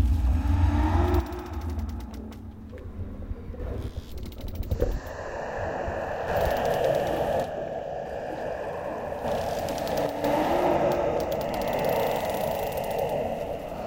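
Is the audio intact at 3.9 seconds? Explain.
No. At 3.9 s the audio sits inside a one channel drops out fault, running from 3.88 s to 6.28 s. The sound falls abruptly by about 6 dB at 3.88 s and stays lower until 6.28 s. The likely cause is one stereo channel going silent for that span. In the mono sum, content common to both channels loses half its contribution, hence the drop. Anything present only in the lost channel disappears entirely.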